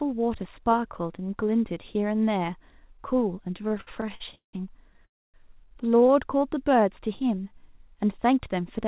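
From 3.58 to 4.55 s the speech drags and stutters through 14 held gaps, the longest 184 ms, covering about 42% of the span. These are repeated stalls (stutter): late packets kept emptying the jitter buffer, and the receiver stretched the last sound each time.

At 4.93 to 4.97 s a sound hangs on slightly too long. This is a short stall from a late packet, which left the jitter buffer empty for about 16 ms until it arrived.

From 5.05 to 5.36 s the audio stops, with about 260 ms of silence before the speech resumes where it left off. This call audio freeze is likely from packets held up in transit, and the receiver filled the wait.

Between 5.98 and 6.15 s there are five brief catches, none longer than 16 ms. This is a lighter round of repeated stalls, with the buffer briefly running dry again.

From 6.39 to 7.72 s the speech runs at about 92% speed at unchanged pitch, with sounds drawn out. 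This is a jitter buffer slow-down: the receiver repeated pitch periods and bits of pause to add about 112 ms of reserve. Throughout, nothing is heard above 4 kHz, which fits a narrowband call codec such as G.711.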